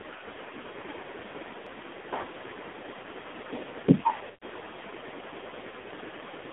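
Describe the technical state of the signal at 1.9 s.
AMR narrowband mobile codec damage is present at 1.9 s, and it runs through the whole clip rather than starting there. The speech has been squeezed through a narrowband mobile path that keeps only about 250 Hz to 3.6 kHz. The codec rebuilds the voice from a vocal-tract model fed by sparse pulses, and the heavy, buzzy, synthetic character points to a low mode around 5.9 kbps.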